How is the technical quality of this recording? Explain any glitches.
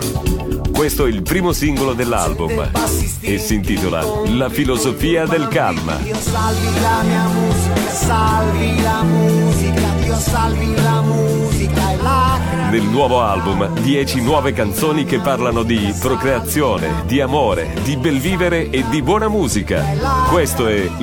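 No glitches; the recording holds together without technical faults.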